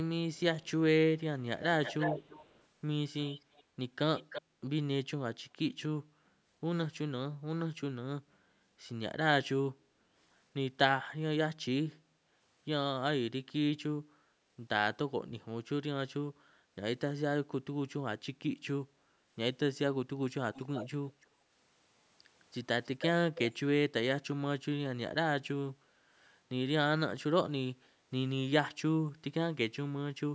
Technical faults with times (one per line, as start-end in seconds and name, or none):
0.34-0.71 echo leak
1.62-2.64 echo leak
3.21-3.64 echo leak
4.17-4.42 echo leak
20.54-20.89 echo leak
21.21-21.27 echo leak
22.84-23.53 echo leak